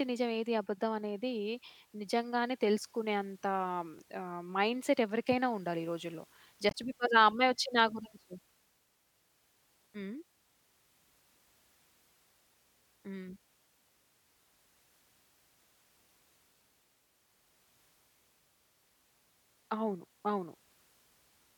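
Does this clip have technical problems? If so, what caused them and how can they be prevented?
Yes. At 3.99 s and again at 9.94 s the speech jumps abruptly forward, with roughly a twentieth of a second simply gone and the two sides butted together with no gap. The two skips sit about 6 s apart, which points to audio missing between chunks as the likely cause: the recorder or processor handles the audio in 6-second blocks and drops a sliver each time it closes one and opens the next. Prevent it by using a recorder or pipeline that overlaps or buffers across block boundaries so nothing is discarded at the handover.

From 6.68 to 6.75 s there is a short, unnatural blip before the speech resumes. This is damaged data in a compressed stream: some bytes in that stretch were corrupted or lost, so the decoder could not read those frames correctly, lost its place, and had to hunt for the next valid frame header before playing normally again. 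Prevent it by transferring and storing the file over a reliable, error-checked path and verifying it with a checksum.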